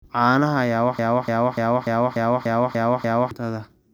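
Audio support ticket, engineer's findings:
Broken-record loop, 0.99–3.31 s: a 293 ms speech fragment replays exactly, back to back, eight times, and the audio due in that span is lost. Likely a stalled player or stream resending its last buffer. On a spectrogram, identical blocks tile at 0.29 s intervals.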